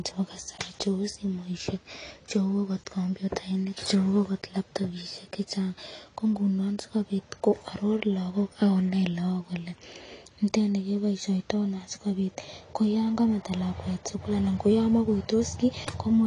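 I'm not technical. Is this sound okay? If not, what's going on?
No, the speech sounds dull and smeared from start to finish, with a watery, warbling fizz on hissing sounds. That is AAC compression damage, likely from saving it too small. Unlike muffling from a bad microphone, the sound has a restless, metallic shimmer.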